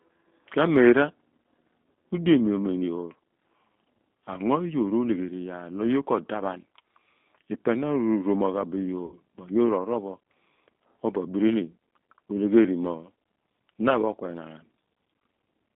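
Throughout, G.729 codec coding limits the speech to roughly 200 Hz to 3.6 kHz, consistent with 8 kbit/s, leaving a plainly rough, synthetic texture. From 9.06 to 9.17 s, just before "mo yoor", VoIP packet loss concealed by the speech codec stretches about 60 ms of sound, consistent with two lost packets, into a fading buzzy tone or coloured noise.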